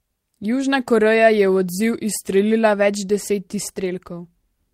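Speech recording with no audible technical faults.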